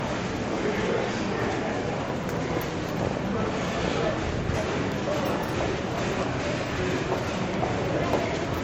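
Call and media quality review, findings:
Whole clip: smeared, swirly artefacts of two kinds stacked, nothing above 16.7 kHz. Likely transcoding between lossy codecs, low-rate MP3 then Vorbis, each adding its own damage.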